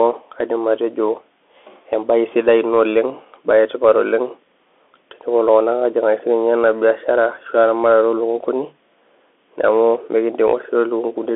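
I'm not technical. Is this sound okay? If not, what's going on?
No, the whole speech clip went through a Bluetooth CVSD headset codec, so it sounds thin and phone-like, with scratchy s sounds and a gritty hiss underneath.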